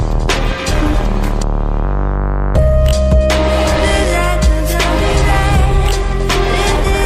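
No technical faults can be heard anywhere in this audio, and the signal holds steady throughout.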